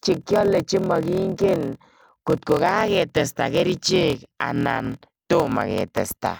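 A block size mismatch (padded) runs throughout: each block is shorter than the next stage expects and is padded with silence, which fits 1024-sample writes. The repeated gaps give a 41.7 Hz buzz, and the speech plays at 0.889 times normal speed, at roughly normal pitch.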